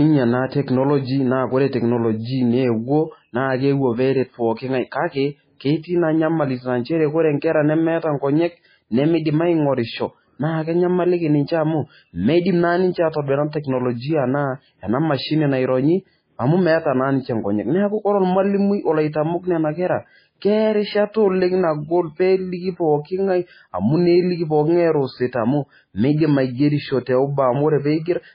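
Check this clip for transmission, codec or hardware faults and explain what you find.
One codec fault runs through the whole speech clip. Throughout, there is likely MP3 compression at a very low bitrate, around 16 kbps. Nothing is heard above 5 kHz. Weak frequency lines flicker on and off between frames, leaving heavy watery, swirly damage.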